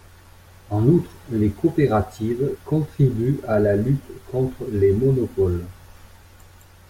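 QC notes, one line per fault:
No faults heard.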